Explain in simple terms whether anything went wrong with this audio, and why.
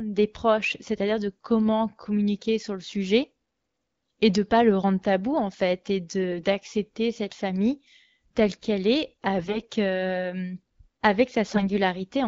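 AMR bit errors struck three times, at 6.32 to 6.44 s after "tabou en fait et", 9.38 to 9.66 s after "famille telle qu'elle est", and 11.54 to 11.71 s. On a weak link, some less protected bits of the phone codec's data arrived flipped, so the decoder rebuilt the voice from wrong details and it turned hoarse, scratchy and gargly. The HD Voice codec itself sounds clear.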